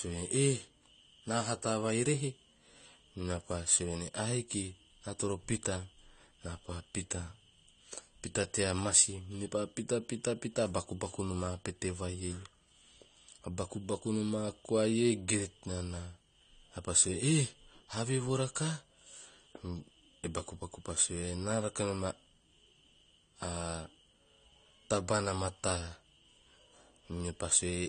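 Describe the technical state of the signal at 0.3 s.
At 0.3 s, as throughout, the speech sounds dull and smeared with fizzy sibilants, likely AAC compression; coarse quantisation fits a rate near 32 kbps.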